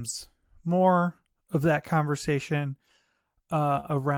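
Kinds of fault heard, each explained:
Short stall from a late packet: at 3.80 to 3.86 s a packet arrived after it was due, so the jitter buffer emptied and the receiver filled the gap by prolonging the speech sound already playing, about 28 ms of stretched audio. When the packet turned up, playback resumed exactly where it had paused, so nothing is lost, but that sound lingers slightly too long, and everything after it now runs about 28 ms later.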